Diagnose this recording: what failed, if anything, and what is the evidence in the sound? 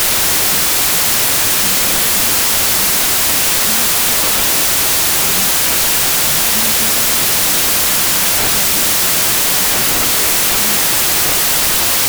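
Wrong sample width at the sample-format conversion stage, present throughout. The speech sits underneath dense, loud noise and runs at half speed, an octave low. That fits 32-bit integer data read back as 16-bit. Each original sample splits into two values. The upper halves keep the real waveform's top bits, while the lower halves scramble into noise. Doubling the sample count stretches playback to half speed.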